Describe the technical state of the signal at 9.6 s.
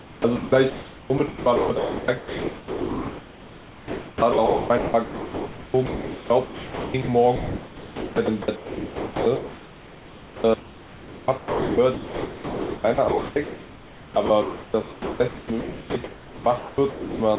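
At 9.6 s the speech sounds choppy: syllable edges drop out and are replaced by comfort noise. This is sound chopped by the voice detector (7.36 to 17.38 s), likely the sender's detector halting transmission and substituting comfort noise, about 8 s in total.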